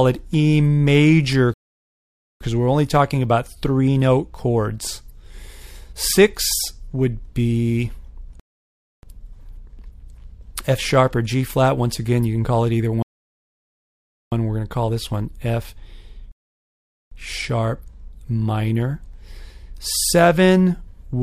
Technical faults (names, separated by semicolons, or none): rebuffering stall